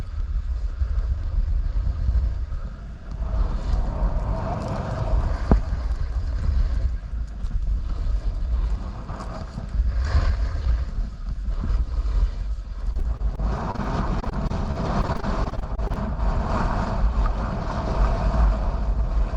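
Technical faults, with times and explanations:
12.93–15.98 s: repeated packet loss (robotic sound). Some two dozen brief dropouts, none longer than about 42 ms, each patched by stretching the preceding sound. Nearly half a second is synthesised fill, so the passage turns choppy.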